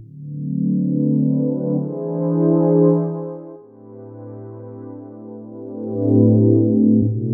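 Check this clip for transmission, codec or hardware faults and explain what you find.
Zipper noise occurs twice, from 2.89 to 3.58 s and from 5.52 to 6.18 s. Level changes of roughly 20 dB, first down and then up, are applied in unsmoothed steps about 200 times per second, so each step clicks and a fine zipping rides on the sound.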